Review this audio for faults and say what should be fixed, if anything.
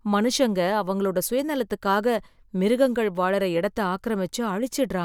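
No faults turn up in this speech recording, so nothing needs to be fixed.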